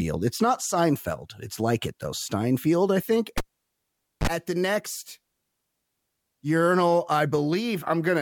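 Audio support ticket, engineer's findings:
Cable pulled and plugged in, 3.38–4.27 s, after "I think", before "at the next". Pop, ~0.85 s near silence, 37 ms 50 Hz buzz as tip reconnects, second pop. Waveform: spike, flat gap, spike. Spectrogram: broadband lines, blank band, 50 Hz harmonic stack. Check connector or cable.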